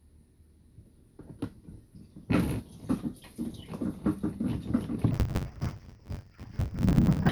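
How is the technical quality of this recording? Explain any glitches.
The recording has one clear glitch near the end. From 5.11 to 7.29 s, interleaved audio is read as planar. Each short block, 10.88 ms long, contains alternating left and right samples, but playback treats the first half as left and the second half as right. Each channel then plays a half-speed stretch of mixed samples, repeated block by block. Because the blocks are so short, the sound turns dull and robotic, with a buzz at the block rate of about 92 Hz and no clear octave drop.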